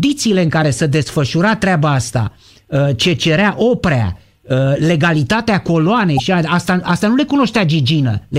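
At 2.24 s, right after "care se desfășura treaba", and again at 6.15 s, between "ce cerea oprea legalitatea" and "asta asta nu le", there's damaged data in the compressed stream: the decoder hits corrupt frames, loses sync and spits out a short glitch lasting about 44 ms each time.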